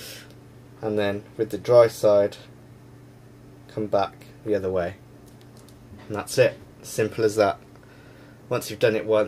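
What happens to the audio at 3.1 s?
Nothing goes wrong at 3.1 s; the audio is intact there.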